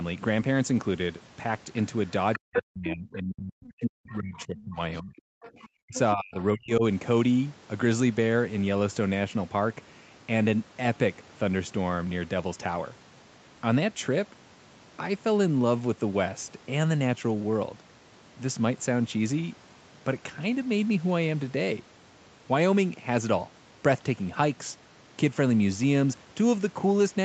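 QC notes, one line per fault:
2.33 to 2.6 s, 3.66 to 3.71 s, 5.43 to 5.68 s, 5.94 to 5.99 s: other side's voice leaking through. A second voice surfaces in short scraps. The first is loud, only about 5 dB under the speech; later ones sit roughly 15 to 25 dB down. Likely cause: loudspeaker echo the canceller left in the microphone signal.
2.36 to 4.8 s, 5.02 to 5.24 s, 5.81 to 5.95 s, 6.14 to 6.84 s: speech suppressed in double talk. The talker's speech dips hard while the far side plays on the loudspeaker, by around 40 dB at worst. The first stretch is the longest. The echo canceller likely mistook overlapping talk for echo and turned everything down.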